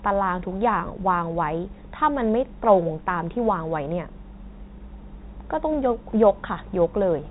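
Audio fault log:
No faults heard.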